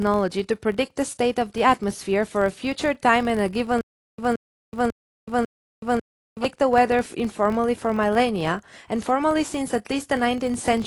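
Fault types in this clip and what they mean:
AAC compression: The speech sounds dull and smeared, with a plainly audible warbling, fizzy texture on sibilants and held sounds. This is likely low-bitrate AAC-LC coding, consistent with about 32 kbps, which trims the top band and coarsely quantises the spectrum.
Filter restarted on every block: A steady buzz at 43.1 Hz runs through the whole clip and rises and falls with the speech level. It fits a filter that loses its state every 1024-sample block, so each block opens with a small click.
Stutter with silent gaps: From 3.81 s to 6.45 s, the same 173 ms fragment plays four times, each followed by 374 ms of digital silence, giving a 546 ms cycle. This is likely a stalled stream replaying its last buffer on each retry. The audio from that span is lost.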